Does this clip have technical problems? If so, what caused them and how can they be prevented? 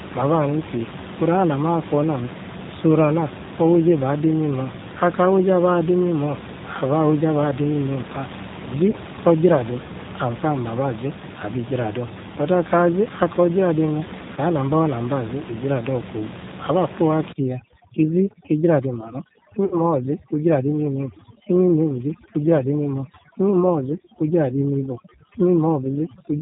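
Yes. Three kinds of fault are audible in this speech clip.

G.729 codec damage runs throughout. The 8 kbit/s coder rebuilds speech from a vocal tract filter, a pitch predictor and a few pulses per frame, so the voice is plainly rough and synthetic, with nothing above 4 kHz. To prevent it, use a wideband codec such as G.722 or Opus instead.

VoIP packet loss concealed by the speech codec occurs at 8.91 s, 14.35 s and 19.65 to 19.77 s. The first two gaps sound like about 20 ms of missing audio, which fits one lost packet each. The third is about 60 ms, which points to three consecutive packets. At each gap the decoder stretches its last pitch and filter into a brief buzzy tone or coloured noise that fades. To prevent it, improve network reliability, prioritise voice traffic, or add a larger jitter buffer.

Overdone noise removal affects the audio from 17.3 s to the end. The room noise sits about 13 dB below the speech, and the reducer pushes it down and breaks it up into twinkling specks. 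It also strips quieter parts of the voice. To prevent it, lower the reduction amount or skip the processing.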